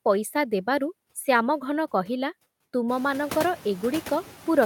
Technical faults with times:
0.00-4.65 noise suppressor artifacts

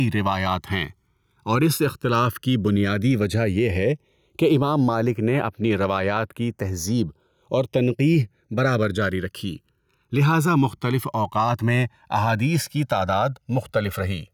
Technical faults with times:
0.00-14.33 channels drifting apart
0.00-14.33 gain pumping

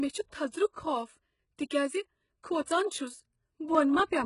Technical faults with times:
0.00-4.25 HE-AAC compression
0.72-0.76 pre-echo
2.64-2.67 pre-echo
3.25-4.00 periodic USB or driver dropouts

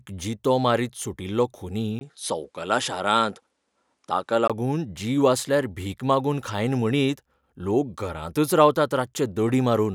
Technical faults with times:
1.99-4.50 input switched to a poorer device

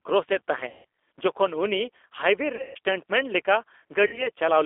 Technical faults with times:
0.00-4.65 G.729 codec
0.69-0.85 VoIP packet loss concealed by the speech codec
2.55-2.77 VoIP packet loss concealed by the speech codec
4.07-4.29 VoIP packet loss concealed by the speech codec

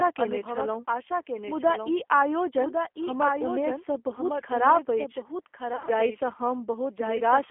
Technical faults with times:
0.00-7.51 doubled audio track
0.00-7.51 G.729 codec
5.73-5.91 VoIP packet loss concealed by the speech codec

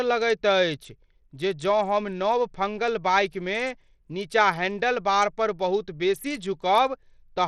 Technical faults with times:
0.00-7.47 Bluetooth SBC compression

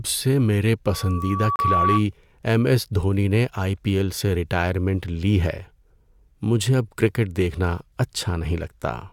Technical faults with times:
0.85-2.05 loudspeaker feedback squeal
1.56-1.59 gap between stream segments
5.58 gap between stream segments

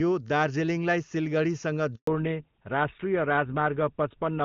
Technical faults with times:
1.95-2.07 handover gap
2.07-4.44 fallback to narrowband

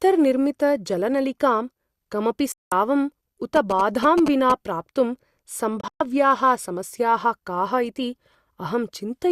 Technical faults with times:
2.52-2.72 digital broadcast dropout
3.56-4.52 GSM signalling bursts
5.81-6.01 digital broadcast dropout

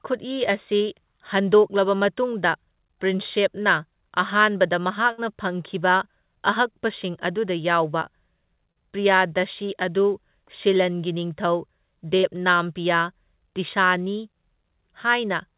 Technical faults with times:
0.77-0.83 short concealed packet loss
5.12-5.21 burst of packet loss
8.72-8.78 short concealed packet loss
12.17-12.26 burst of packet loss

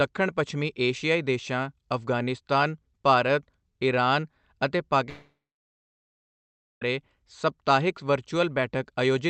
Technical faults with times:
5.09-6.82 long network dropout

